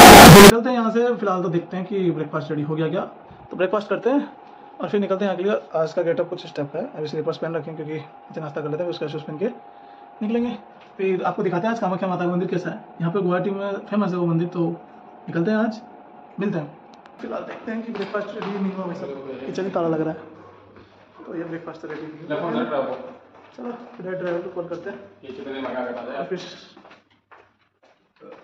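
From the start to 0.5 s the audio is a blast of harsh, very loud distortion, with quiet moments as loud as everything else. This is most likely signed and unsigned mixed up: flipping the top bit, which fits 16-bit samples, turns each small swing around zero into a leap across the entire range. On a waveform that half-second is a solid block of huge swings. A spectrogram shows dense broadband energy reaching the top of the scale.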